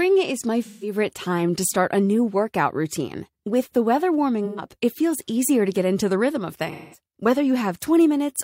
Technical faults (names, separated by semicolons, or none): AAC frame loss with concealment